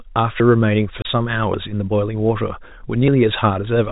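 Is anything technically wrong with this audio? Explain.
Yes. At 0.4 s, 1.54 s and 3.08 s the speech jumps abruptly, skipping ahead with no gap. About 40 ms vanishes at the first point and about 20 ms at the others. This is likely a dropped buffer (overrun), where the program fell behind, the hardware overwrote the samples before they were collected, and the two sides were spliced together.

From 1.02 to 1.05 s the speech is cut by a 30 ms hole of dead silence with hard edges, which fits a single lost packet. This is packet loss filled with silence: the receiver had nothing to play for that stretch and inserted silence in its place, all heard through the narrow telephone band of G.711 coding.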